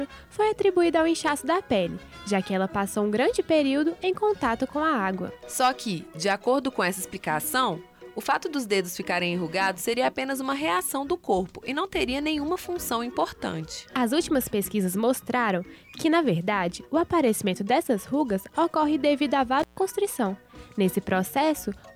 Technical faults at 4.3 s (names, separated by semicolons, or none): none